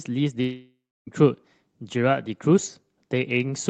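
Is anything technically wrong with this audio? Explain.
Yes. From 0.41 to 1.09 s there is a long network dropout in the speech. About 0.66 s of audio never arrives. The receiver stretches the last sound into a fading buzz or hiss for about 0.65 s of that gap, and roughly 0.31 s of it is plain silence. This is likely packet loss on the network. When the audio returns, the lost part is simply gone. The call path's coding noise and an upper limit near 8 kHz fit Opus at about 24 kbps.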